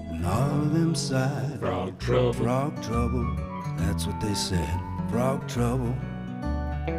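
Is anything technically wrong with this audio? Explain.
No, there is no technical fault to report in this recording.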